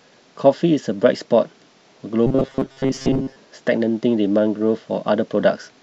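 A speech recording that, from 2.27 to 3.37 s, turns into a rigid, metallic drone, robotic sound from repeated short buffers, with a steady buzz near 134 Hz laid over the syllables, whose rough shape still comes through. The cause is likely that fresh audio stopped arriving in time and playback kept looping a slice of about 7.5 ms, one period of that buzz, so most of that stretch is repeated material while the real signal is skipped.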